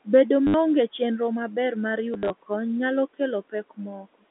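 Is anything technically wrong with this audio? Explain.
Yes. Two kinds of fault are audible in this speech.

Packet loss with last packet repeated occurs at 0.47–0.54 s, just before "chenro maber mar", and again at 2.14–2.3 s, between "chenro maber mar" and "kony nyalo". The first gap lost 70 ms of audio, consistent with 10 ms packets. The second lost 100 ms scattered over 160 ms, with runs up to 50 ms. The receiver replayed the last good packet, and the repeated packets buzz like a robotic stutter. On a spectrogram the repeats show as stacked identical slices. The waveform shows a short repeating block.

Speech cut by the noise suppressor occurs at 3.5–3.79 s, after "kony nyalo", and at 4.01–4.24 s. Each stretch holds about 100 ms of affected sound. The suppressor mistook speech energy for background and pulled it down with the room noise, by about 19 dB at worst in the first stretch and about 16 dB in the second, so syllables sound swallowed. 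On the waveform the envelope sags abruptly there. On the spectrogram those moments fade toward the noise floor, which sits about 25 dB under the speech.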